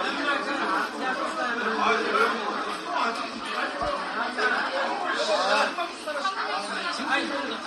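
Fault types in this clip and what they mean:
MP3 compression: the audio is likely MP3-encoded, and the damage is plainly audible, which fits a low bitrate of around 48 kbps. With too few bits, the encoder discards the treble, so nothing remains above 13.1 kHz. On a spectrogram this appears as a flat horizontal ceiling across the whole clip, with speckled holes beneath it where weak components drop in and out between frames, giving a watery, swirling texture. The waveform shows softened, smeared attacks.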